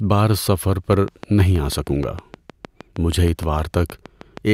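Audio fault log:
0.93–4.38 s, train of clicks: a steady ticking of about twenty sharp, near-identical pops riding on top of the speech, evenly spaced at 6.4 per second and peaking about 5 dB above it. Likely caused by interference from nearby equipment or a faulty connection or power supply injecting repeated pulses.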